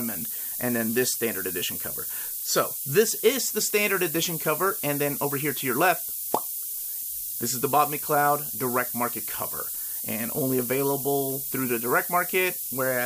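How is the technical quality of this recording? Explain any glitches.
The recording has two clear technical problems: a heavy hiss across the whole clip and a regular ticking that runs nearly its full length.

The hiss is low bit depth with noise shaping. The signal is carried on only 5 bits, and the rounding error is pushed upward in frequency, so the noise is roughly as loud as the sound itself and tilts sharply toward the treble. Plain dither or tape hiss would sound flat across the band. This hiss is thin and bright, and it does not change with level.

The ticks are clock slip clicks, from about 0.26 s to 12.68 s, roughly every 0.7 s, about twenty in all. Each is a single sample dropped or repeated, likely because two devices are running on unsynchronised clocks that differ by around 30 ppm. Packet-loss dropouts would be irregular gaps. These are faint, evenly spaced ticks with no gaps, and they are easiest to hear on loud, sustained passages.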